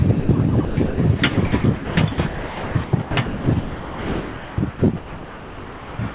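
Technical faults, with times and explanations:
0.2 to 0.29 s, sound dropped by the voice detector: the sender's voice detector likely misjudged a quiet stretch as background and stopped transmitting, so about 80 ms of sound vanishes into a 90 ms patch of steady comfort noise before the signal returns.
0.65 s to the end, sound chopped by the voice detector: the detector likely keeps toggling between sending and muting, so roughly 3.8 s of the remaining sound is swapped for comfort noise. The audio turns choppy, with edges clipped.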